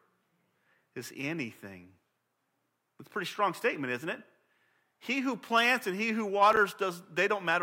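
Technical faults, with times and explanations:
6.53–6.57 s, chunks out of order: just after "plants and he who", a 10 ms slice of the speech plays three slices late, after the material that should follow it. Nothing is missing, but the sequence is scrambled, and the three hard joins produce a brief jumbled flutter. On a waveform, abrupt steps appear at the seams. On a spectrogram, thin vertical broadband lines cut across the harmonics, which jump discontinuously within that 40 ms span.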